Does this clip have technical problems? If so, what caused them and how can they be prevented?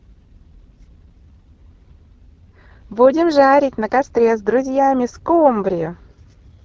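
Yes. Throughout the speech the sound is rough and raspy, with a grainy, buzzy texture and a thin, hissy top end. This is the AMR wideband (HD Voice) codec running at a low rate; the damage points to the 8.85 kbit/s mode, the second lowest. The codec rebuilds speech up to 6.4 kHz from a pulse-excited vocal tract model, with too few bits to capture the excitation cleanly, and fills 6.4 to 7 kHz with shaped noise. To prevent it, use AMR-WB at 12.65 kbit/s or higher, or a better codec.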